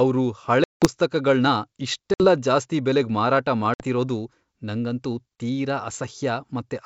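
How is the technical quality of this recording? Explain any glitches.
The recording is a wideband call with a clear top end reaching toward 7 kHz, marred by three dropouts from packet loss on an ADPCM call. They come at 0.64 to 0.86 s, a gap of 180 ms that points to roughly ten lost packets, then at 2.14 to 2.27 s and 3.74 to 3.85 s, each 60 ms. Silence fills each hole, but the receiving decoder's predictor and step size have drifted from the sender's. When sound resumes it arrives slightly distorted, settling within tens of milliseconds. A waveform shows flat, square-edged gaps. A spectrogram shows blank vertical bands.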